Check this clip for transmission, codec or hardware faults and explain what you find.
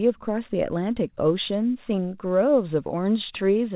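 Nothing's wrong here; the speech sits in the narrow telephone band with nothing above 4 kHz, which is just what a G.711 mu-law call path sounds like when it's doing its job.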